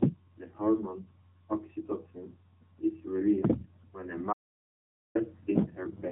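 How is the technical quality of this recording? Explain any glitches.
Poor: the speech carries plainly audible mobile-codec damage from start to finish, and it cuts out completely for a moment near the end.

Throughout, the voice sounds thin, buzzy and synthetic, confined to a narrow band from about 150 Hz to 3.7 kHz with nothing above. This is the AMR narrowband mobile codec. At 8 kHz sampling it rebuilds the voice from a vocal-tract model excited by sparse pulses. The coarseness of that excitation fits a low mode around 7.4 kbps, which leaves the codec damage plainly audible.

From 4.33 to 5.15 s, right after "when a", the sound drops to total silence for about 0.82 s, with no room tone, then resumes mid-flow. This is an audio dropout to silence. Whatever was spoken in that span is lost. The input was likely interrupted, for example by a failed link or momentary disconnection, while the recording chain kept writing silence.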